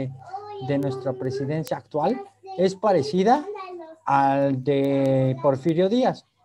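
An unlocked receiver clock, roughly 100 ppm off, slips one sample about every 0.2 s from 0.20 to 6.32 s, causing sharp, regular word clock ticks.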